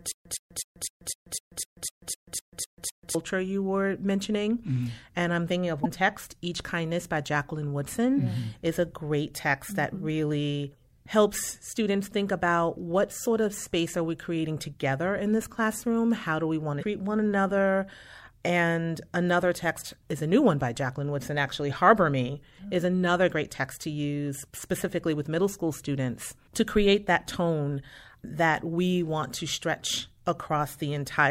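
From the very start until 3.15 s, a 115 ms burst of speech repeats twelve times, each followed by about 138 ms of dead silence, a steady 253 ms cycle. This stutter with silent gaps likely comes from a stalled stream replaying its last fragment, losing the speech meant for those moments.

At 5.82 to 5.86 s and again at 16.79 to 16.83 s, a short glitch cuts in. This points to damaged data in a compressed stream, where the decoder misread corrupted frames and resynchronised on the next valid one.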